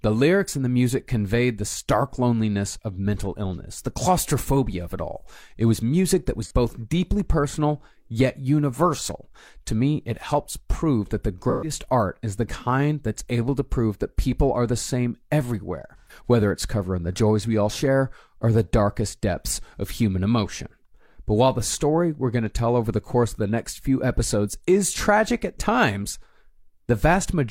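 AAC frame loss with concealment occurs at 6.43 s after "was music that was", 11.50 s after "helps prove that the" and 15.98 s after "are the same everywhere". The decoder rebuilds each gap (about 43 ms, then 128 ms twice) from the last good spectrum. The result is a smeared, phasey blur rather than a silent dropout.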